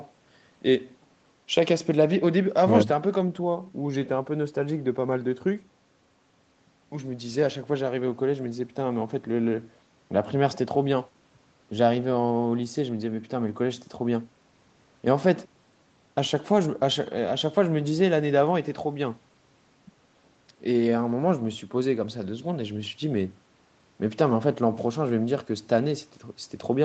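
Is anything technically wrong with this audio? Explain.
No, nothing technically wrong can be heard here.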